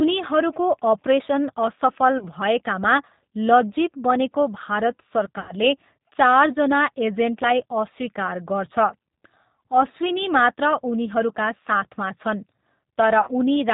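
The speech runs through the G.729 codec throughout, here the G.729A variant at 8 kbit/s, and the damage is plainly audible. The encoder models each 10 ms frame as a vocal tract filter driven by a pitch predictor and a few pulses, so nothing above 4 kHz survives and the voice takes on a rough, slightly synthetic grain. That pulse-built coarseness distinguishes it from a clean telephone band-limit, which would sound muffled but smooth.

Three bursts of VoIP packet loss concealed by the speech codec follow. The first runs from 2.18 to 2.28 s, with 30 ms of audio missing, which fits a single lost packet. The second, from 5.40 to 5.54 s, covers 90 ms, consistent with three packets in a row. The third, from 13.21 to 13.31 s, covers 60 ms, suggesting two packets. In each gap the decoder keeps repeating its last pitch and filter at falling gain, so the sound smears into a buzzy tone or coloured noise that fades. 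Because every frame is built on the one before, the voice stays weak or distorted for a short while after the stream resumes. That concealed tail is what separates these events from plain dropouts, which would produce hard silence or clicks.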